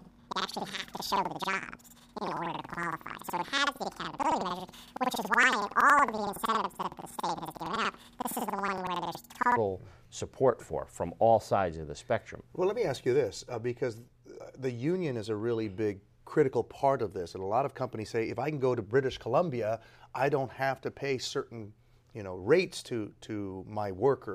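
From 0 to 9.6 s the audio sounds an octave high with a flutter at 10.8 Hz, the mark of planar audio read as interleaved. Each 93 ms block, which fits a 4096-sample block, plays twice at double speed, left then right. Unlike a sample-rate error, the pace stays correct.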